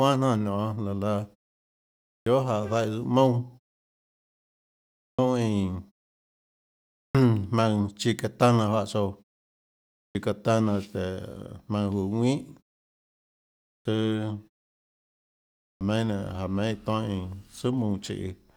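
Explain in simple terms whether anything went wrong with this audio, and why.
Something did go wrong: a clipped start after a pause, six times. At 2.16, 5.09, 7.04, 10.05, 13.76 and 15.7 s, speech resumes abruptly with roughly a tenth of a second shaved off the front, because the output device dozed off during the preceding silence and needed a moment to wake.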